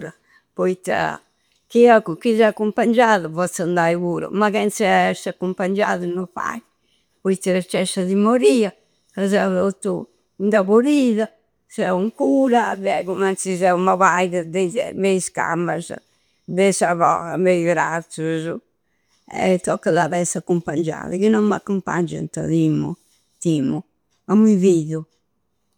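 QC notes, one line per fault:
No fault found in this speech clip.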